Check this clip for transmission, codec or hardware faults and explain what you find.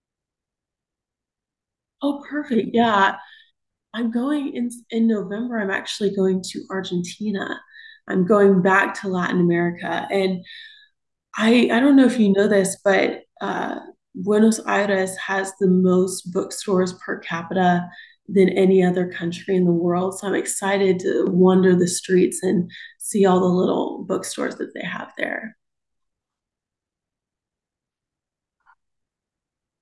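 Nothing found here, with no transmission, codec or hardware problem audible anywhere in the speech.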